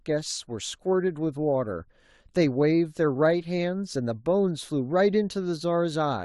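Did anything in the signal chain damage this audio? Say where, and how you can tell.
No, nothing along the chain has left an audible mark on this speech recording.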